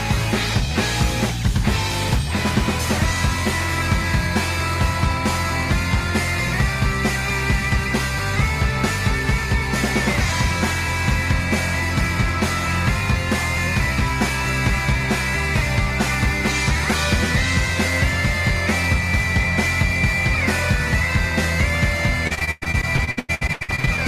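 From 22.27 to 24.00 s, repeated packet loss (robotic sound): about twenty dropouts, each up to 106 ms, patched by extending prior sound, so nearly half turns choppy, with smeared, repeated spectrogram blocks.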